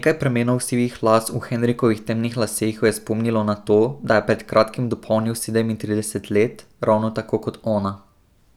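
No technical faults can be heard anywhere in this recording.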